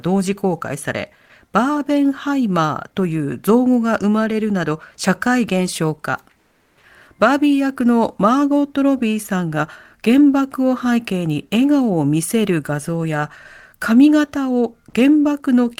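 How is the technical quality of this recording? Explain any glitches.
One glitch stands out, a short patch of comfort noise in place of the background between 6.37 and 6.73 s. For about 360 ms during a pause, the room tone, already about 47 dB below the loudest speech, gives way to a flat, textureless hiss roughly 3 dB quieter, then the real background returns with the next sound. The likely cause is discontinuous transmission, as in Opus DTX: the sender stopped transmitting when it detected no speech, and the receiver filled the gap with synthetic noise approximating the background.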